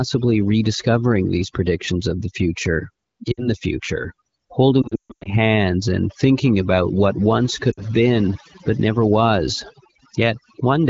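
Overdone noise removal runs through the whole clip. An overly aggressive suppressor drops any frequency band near its noise estimate, leaving near-silent gaps with twinkling specks. Unlike codec roughness, the damage follows the level of the sound rather than its bandwidth.

Lost AMR speech frames strike three times. At 3.32 s, after "predictions of the future", a 60 ms stretch drops to near silence, which fits about three missing frames. From 4.81 to 5.32 s, before "and thinking about what", losses scatter over 440 ms. The longest run, 140 ms, drops to near silence within two frames. At 7.71 s, before "been but never was", another 60 ms stretch drops to near silence. Each time the decoder repeats the last pitch with shrinking gain. Unlike a plain dropout, it smears rather than cuts cleanly.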